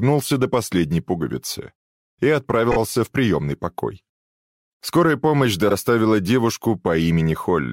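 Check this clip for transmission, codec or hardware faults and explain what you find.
Two brief stutters are audible, both caused by repeated frames. From 2.71 to 2.76 s a 26 ms slice plays three times in a row, and from 5.68 to 5.74 s a 52 ms slice plays twice. Compressed frames were sent or written more than once, so the decoder replayed them, lengthening the audio by about 104 ms in total.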